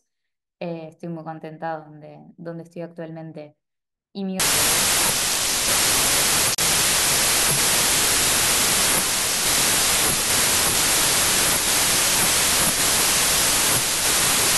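From 4.40 s to the end, the speech turns into loud, harsh noise with the original only faintly audible underneath, slowed to three-quarters speed and lowered in pitch. This is a wrong sample width fault. Data written as 32-bit integers are being read as packed 24-bit samples, so each four-byte value is split across mismatched three-byte reads. Only some reconstructed values keep the true high-order bits, and the rest become noise. The extra samples produced stretch the audio to 0.75 speed. Unlike a plain speed or pitch error, the slowed speech here is buried in dense broadband noise. A plain speed or pitch error would leave it clean.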